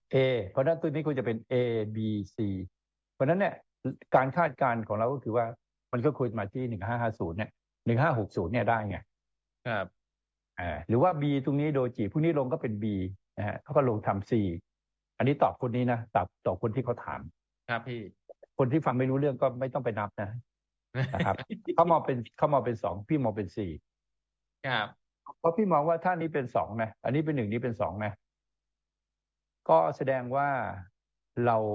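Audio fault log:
No faults heard anywhere in this clip.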